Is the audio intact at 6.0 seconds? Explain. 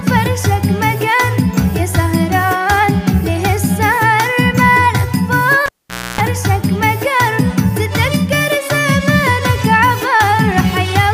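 No: a pop, half a second of near silence, a 60 Hz buzz of about 0.29 s, and another pop fill 5.66–6.21 s, because the cable was pulled and plugged in.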